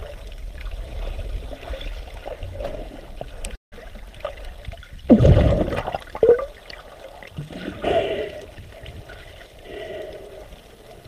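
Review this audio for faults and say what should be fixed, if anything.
From 3.55 to 3.85 s there is a call audio freeze: the last sound is stretched into a fading buzz for about 165 ms, then about 150 ms of silence. Unlike a packet-loss dropout, nothing is skipped; the audio resumes exactly where it stopped, and everything after runs about 165 ms later. The likely cause is packets held up in transit until the jitter buffer ran dry. A larger or adaptive jitter buffer, or a steadier network path, would prevent it.

From 8.96 to 10.53 s there is a jitter buffer speed-up: the audio plays at about 110% speed while pitch stays the same, because the receiver repeatedly trimmed short pitch-period pieces, around 150 ms in all. Pitch holding steady distinguishes this from a sample-rate mismatch, which would raise the pitch. Gentler, slower buffer-target adjustment would prevent the rushed stretch.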